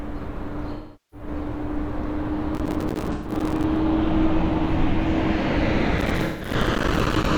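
At 0.73 to 1.27 s there's AAC frame loss with concealment: about 384 ms of data went missing, so the decoder patches it from the last good spectrum, giving a smeared, phasey stretch. From 2.55 to 3.64 s, processor overload crackle sets in. Dozens of roughly 5 ms buffers miss their deadline and drop to silence, producing gritty tearing, with another concealed AAC gap at 3.12 to 3.32 s. The same crackle returns from 5.98 to 7.26 s, carrying a third concealed loss at 6.24 to 6.52 s.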